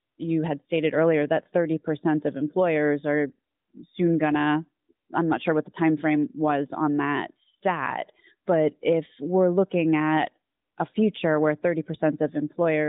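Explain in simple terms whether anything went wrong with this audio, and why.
Lost AMR speech frames cause two brief hiccups: at about 1.44 to 1.48 s, just after "had stated earlier that", and at about 10.92 to 10.96 s, just after "we're looking at a". Each time, one 20 ms slice of the call was garbled on the radio link and thrown away. The phone's narrowband mobile codec covered the gap by replaying the last good sound more quietly, so you hear a quick dip or warble before the voice returns.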